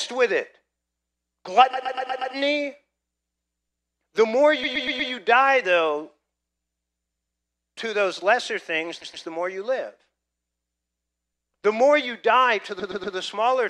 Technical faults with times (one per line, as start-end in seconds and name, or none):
1.73-2.33 repeated frames
4.63-5.11 repeated frames
7.13-7.37 repeated frames
9.01-9.25 repeated frames
12.79-13.15 repeated frames